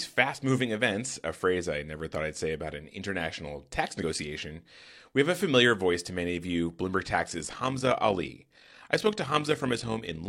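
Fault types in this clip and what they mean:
Damaged data in a compressed stream: corrupted bytes made the decoder lose frame sync and hunt for the next header, giving a brief glitch near 4.0 s.
Overlap-add ripple: frames were rejoined with an overlap that doesn't sum evenly, so from 7.2 s to the end the level pulses about 6 dB at roughly 50 Hz, a rough flutter.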